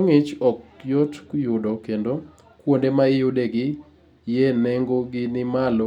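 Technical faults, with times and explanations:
No technical faults can be heard in this speech recording. There is nothing to time or explain.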